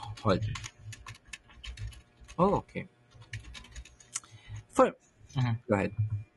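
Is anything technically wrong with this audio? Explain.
Yes. There are two problems.

Throughout the clip, the speech sounds rough and grainy. Noise fills the gaps between the harmonics, and the top band sounds thin and synthetic. The damage is plainly audible. The likely cause is low-delay AAC compression, the AAC-ELD type used in video calls. Its short frames resolve pitch harmonics poorly and cost extra bits. The degree of coarseness fits a bitrate around 32 kbps.

There are also two AAC frame losses with concealment. From 0.49 to 0.59 s, about 60 ms of audio is missing, which fits three lost frames. From 5.31 to 5.34 s, about 20 ms is missing, which fits a single frame. In both places the decoder filled the gap by reusing the last good spectrum. The sound there turns briefly smeared, noisy or phasey.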